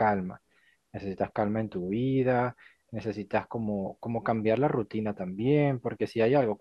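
No technical faults can be heard anywhere in this speech recording. There is no moment in the audio that calls for a time mark or an explanation.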